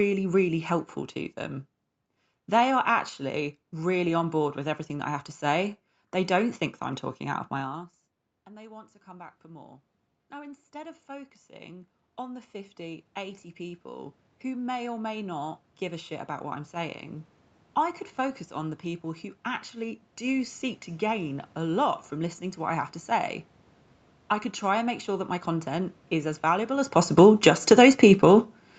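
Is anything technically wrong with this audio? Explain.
Yes, the level of this speech clip is pulled around by automatic gain control twice.

Automatic gain rising runs from 7.56 s, just after "I'm talking out of", to 22.86 s, before "to say". The talker moves away around 7.5 s and the input drops by about 24 dB. The gain control slowly restores about 21 dB over some 15 seconds, so voice and room noise climb back together. On the waveform the envelope and the noise floor rise as a slow ramp.

Automatic gain falling comes at 27.03 s to 27.74 s, after "is as valuable as". The talker moves around 26.5 s, and the gain control cuts about 10 dB within roughly 0.7 s. The audio starts out loud and then sinks along with its background. On the waveform the peaks shrink quickly, and on the spectrogram the whole band dims, up to the 8 kHz limit of the call path.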